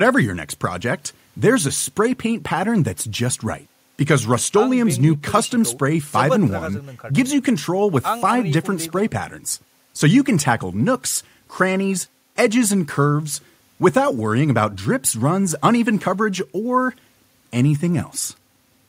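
Listening through the speech recording, nothing stood out as a technical fault at any point.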